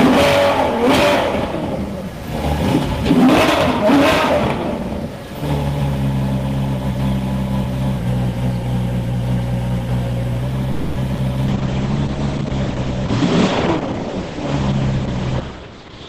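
At 3.25 s the whole sound lurches sharp by about a semitone (102 cents) and runs 6.1% fast until 4.28 s. That's most likely a drift correction step: a clock-matching resampler jumped its playback rate in one go instead of easing it.

From 10.72 to 10.98 s there's a call audio freeze, likely from packets stalling in transit until the jitter buffer ran dry. The receiver stretches the last bit of sound over 240 ms, then carries on right where it left off, so nothing is lost but everything after sits 240 ms later.

Straight after, at 11.14 to 11.17 s and again at 11.17 to 11.20 s, come two short concealed packet losses. Each has a 10 ms patch extrapolated from the preceding sound, but 40 ms and then 20 ms of real audio never arrive. You hear a quick smear, and the skip pulls back roughly 30 ms of that delay.

At 11.47 s a call bitrate drop kicks in. The encoder falls from 32 to 9 kbps and the bandwidth shrinks from 20 kHz to 8 kHz, so the top end goes dull and the texture turns coarse. 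It never recovers before the end.

Finally there are two jitter buffer speed-ups, where pitch-period chunks are trimmed out to shrink the buffer. The first, from 13.76 to 14.09 s, runs at 118% and drops roughly 70 ms. The second, from 15.60 to 16.07 s, runs at 107% and drops about 40 ms. Both sound hurried while the pitch stays put.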